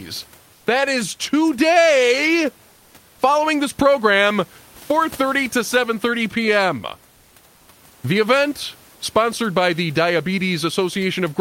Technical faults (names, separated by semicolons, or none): comfort noise in place of the background